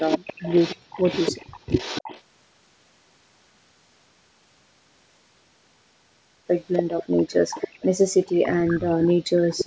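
Echo leak from 0.0 to 2.19 s, 6.74 to 7.34 s, 7.5 to 7.83 s, 8.28 to 8.49 s, 8.66 to 9.29 s and 9.49 to 9.56 s: a faint copy of the speech trails about 290 ms behind, roughly 15 to 35 dB below it. This is likely a far-end loudspeaker echo that the canceller did not remove. Speech suppressed in double talk at 9.57 to 9.67 s: the speech drops steeply, by about 40 dB, likely as the canceller turns down both its own talker and the loudspeaker echo.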